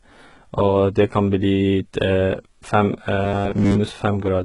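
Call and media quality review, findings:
Throughout: treble gritty and lispy on s sounds, heavy codec damage, nothing above 11 kHz. Likely HE-AAC compression at a very low bitrate, about 12 kbps. Upper band rebuilt by spectral band replication from copied lower bands, so harmonics misalign.

3.22 to 3.79 s: rigid metallic buzz at 100 Hz, loosely following the speech. Likely robotic sound from repeated short buffers. A 10 ms chunk is replayed over and over while most of the real audio in that stretch is skipped.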